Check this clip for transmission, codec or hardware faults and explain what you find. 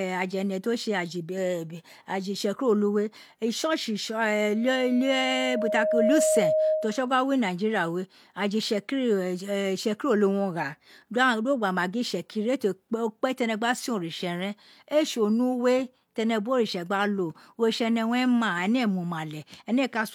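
There is one fault, a loudspeaker feedback squeal, from 4.47 to 7.13 s. A microphone was picking up the loudspeaker it was driving, and at 625 Hz the gain around that loop rose above one, so the tone fed itself on each pass. It swells over roughly a second and a half into a steady howl that sits about 5 dB above the speech, until the squeal stops at 7.13 s.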